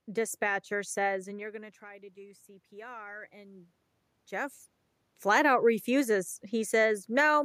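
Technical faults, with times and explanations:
1.26–3.73 s, automatic gain rising: after "dispatcher says" the input level falls by about 19 dB as the talker moves away, and the gain control slowly adds about 5 dB, so voice and room noise swell together over roughly two and a half seconds.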